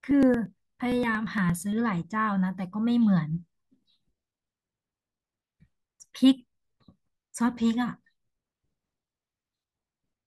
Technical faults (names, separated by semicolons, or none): periodic USB or driver dropouts